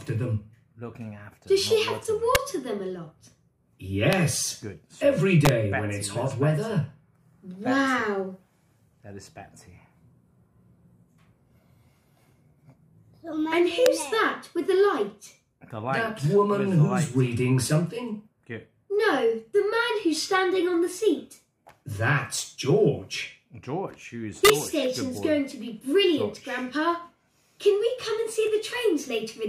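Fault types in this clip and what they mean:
integer overflow: Loud peaks exceed the integer limit and wrap to the opposite sign instead of clipping. Violent cracks are heard at 2.35, 4.13, 5.45, 13.86 and 24.45 s.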